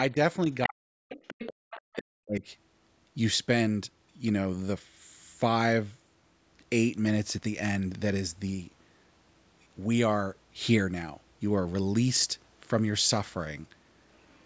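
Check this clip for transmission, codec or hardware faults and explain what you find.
Three kinds of echo-canceller fault appear, clustered in the first two and a half seconds with one faint trace at the very end. The call microphone processing is also audible: nothing reaches above 8 kHz.

Speech suppressed in double talk, 0.66 to 1.16 s and 1.87 to 2.43 s: the speech dips by roughly 40 dB, for about half a second each time. The likely cause is an echo canceller that could not separate the talker from the loudspeaker echo and so turned both down.

Other side's voice leaking through, 1.11 to 1.54 s, 1.70 to 1.95 s and 14.14 s to the end: a second voice sits beneath the speech. It is roughly 15 dB below the speech in the first two stretches, and much fainter, around 35 dB down, at the end. This is likely loudspeaker playback that the echo canceller left in the microphone signal.

Background gated by the echo canceller, 1.54 to 1.59 s: the room sound drops by about 40 dB for roughly 50 ms, then returns at once. 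The canceller clamped the microphone hard while the loudspeaker was active and released it a moment later.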